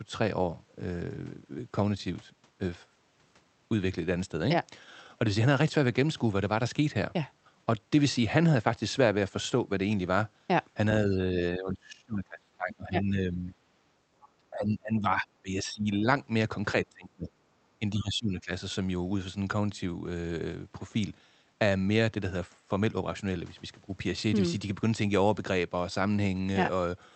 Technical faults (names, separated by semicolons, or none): speech suppressed in double talk